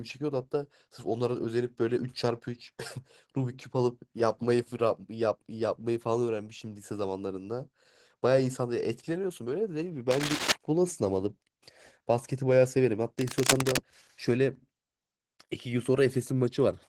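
Opus voice compression runs through the whole speech clip. The damage is plainly audible. The sound points to a low bitrate, around 16 kbps, in hybrid mode. The lower band is coded by linear prediction, and a transform layer covers the range above 8 kHz. The band still reaches about 20.3 kHz. But the excitation is coded coarsely, so the speech sounds hoarse and slightly robotic. The frame rhythm fits 20 ms frames.

Cable scratch noise appears from 10.11 to 10.52 s and again from 13.19 to 13.83 s. Each burst is dense and uneven, with a scratching, rustling texture laid over the speech. It sits about as loud as the speech itself. The likely cause is a worn cable or connector being moved, so its contact resistance jumps rapidly. The second burst is a little longer, about 0.64 s against 0.41 s.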